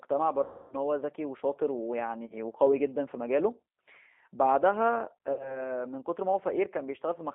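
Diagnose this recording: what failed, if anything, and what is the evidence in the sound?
The codec stage is at fault throughout, a G.729 codec. The speech is confined to about 250 Hz to 3.7 kHz. It sounds rough and slightly synthetic, with plainly audible damage, which fits 8 kbit/s G.729A. The decoder rebuilds speech from a filter, pitch predictor and sparse pulses.

The network stage dropped packets, giving VoIP packet loss concealed by the speech codec. Gaps run from 0.44 to 0.75 s, 2.26 to 2.36 s, and 5.33 to 5.63 s, covering about 260, 40 and 60 ms of lost audio. The decoder extrapolates a buzzy tone or coloured noise that fades. Recovery lags afterwards.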